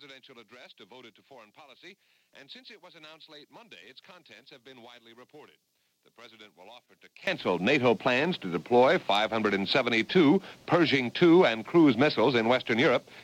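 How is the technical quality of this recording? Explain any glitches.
The recording has one clear fault. From the start to 7.27 s, the level sits about 26 dB lower than in the rest of the clip, and the sound that remains is faint. The likely cause is one channel inverted: one side of the stereo pair had its polarity flipped, so when the two sides are summed to mono, everything they share cancels. Only the small difference between the channels survives, which leaves a faint residue.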